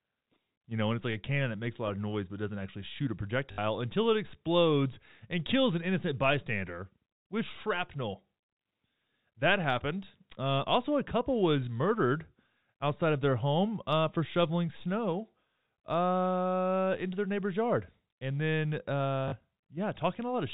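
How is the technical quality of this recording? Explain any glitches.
Two short dropouts mark an audio path carried over fixed-line telephone coding, band-limited below 4 kHz. The recording has packet loss with last packet repeated: audio went missing at 3.52 s for 60 ms, between "doesn't actually shoot a" and "until it explodes and", and at 19.28 s for 40 ms. The receiver replayed its last packet to fill each gap, which points to 20 ms packets. Each run of repeats gives a brief 50 Hz robotic stutter.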